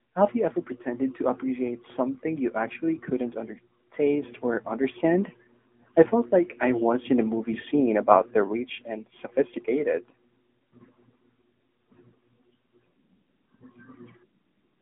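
AMR narrowband mobile codec damage runs throughout. The speech is squeezed into roughly 200 Hz to 3.4 kHz, with nothing above 3.6 kHz, and sounds plainly buzzy and synthetic, consistent with a rate near 10 kbps. A sudden gain jump at 4.23 s lifts the speech and its background together by about 6 dB until the end, likely a level change applied without a ramp.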